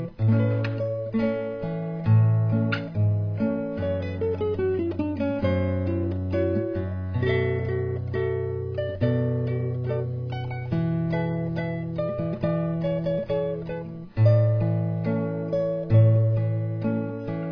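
No technical faults can be heard anywhere in the recording, and the signal stays steady and intact throughout.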